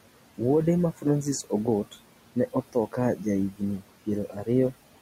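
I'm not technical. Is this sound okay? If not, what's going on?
No. Noise suppressor artifacts run through the whole clip. A noise-cleaning filter keeps judging which parts of the sound are steady background noise and turns those parts down, moment by moment. Because it keeps changing its mind, the background noise in the room dips whenever the talking pauses and creeps back underneath it.

Speech cut by the noise suppressor happens four times: between 2.36 and 2.98 seconds, at 3.16 to 3.26, at 3.51 to 3.62, and at 4.3 to 4.48. Each time, the same filter mistakes a small piece of the talking for background noise and turns it down along with the noise. In the first stretch only scattered bits are hit, and each of the others is about a tenth of a second or a little more. Those soft sounds come out faint or swallowed, as if part of a word dropped away.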